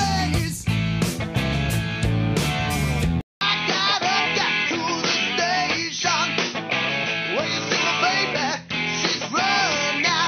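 At 3.21 s the audio drops out for about 200 ms and then returns duller and boxier for the rest of the clip, most likely because the input switched to a poorer device. A spectrogram would show a flat-line gap, then nothing above 6.2 kHz and a new steady noise floor roughly 45 dB below the signal. On the waveform the level looks much the same on both sides of the break.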